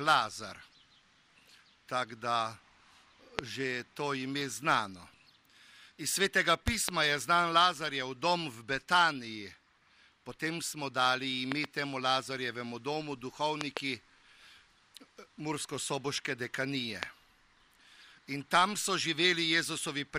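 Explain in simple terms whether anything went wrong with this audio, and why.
Sharp pops jump out over the sound at 3.39 and 17.03 seconds, with quick double pops at 6.68 to 6.91, 11.52 to 11.66 and 13.61 to 13.79 seconds, while the audio continues underneath. These loud pops are likely sudden electrical jolts, such as static or a switch, hitting the signal.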